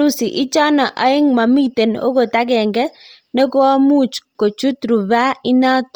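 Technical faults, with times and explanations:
Throughout, Bluetooth LC3 compression. The speech has a heavy breathy, grainy edge, and nothing remains above 20.4 kHz. This is likely LC3 coding, which drops much upper spectrum and refills it with noise. The damage fits 32 kbps and 10 ms frames.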